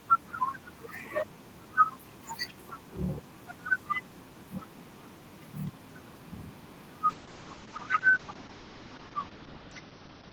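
From 7.1 s to the end, there's a call bitrate drop: the link's estimate collapsed and the encoder was squeezed, from roughly 32 down to 8 kbps by the sound of it. The top end is clipped at 6 kHz, so the speech goes muffled and watery, and it never recovers.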